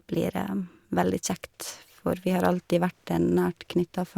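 No technical faults can be heard anywhere in the recording.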